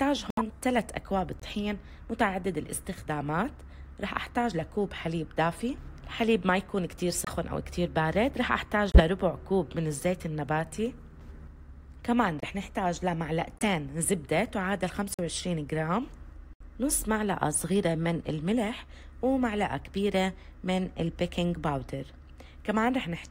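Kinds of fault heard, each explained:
Corrupt frame muted: damaged compressed frames were rejected by the decoder and replaced with silence, leaving eight abrupt dropouts, each roughly 40 to 110 ms long.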